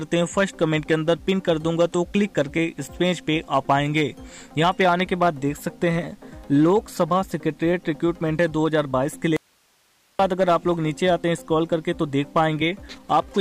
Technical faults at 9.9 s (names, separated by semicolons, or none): audio dropout to a faint residue